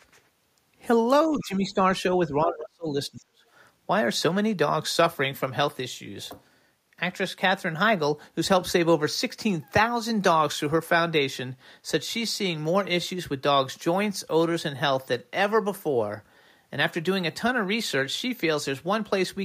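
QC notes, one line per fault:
1.27–1.83 s and 2.28–3.43 s, speech suppressed in double talk: The echo canceller likely could not tell the talker from the far side's loudspeaker echo while both spoke, so it attenuated everything. The voice dips by roughly 10 dB for about half a second, then by a much deeper 30 dB or so across roughly a second.
3.20–3.24 s, other side's voice leaking through: Residual loudspeaker echo likely slipped past the echo canceller into the microphone path during the second suppressed stretch. It appears as a brief, faint scrap of a second voice, very low at around 35 dB below the talker.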